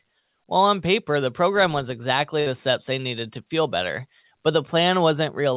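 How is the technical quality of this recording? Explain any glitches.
The recording has one glitch, a brief dropout in the speech; it is band-limited to telephone range, with nothing above 4 kHz, which fits narrowband G.711-style call coding.

From 2.40 to 2.48 s there is a burst of packet loss. Several consecutive packets never arrived in time, so the receiver stretched the last sound for about 59 ms while fading it down, heard as a short decaying buzz or hiss. Speech then resumes with roughly 60 ms skipped.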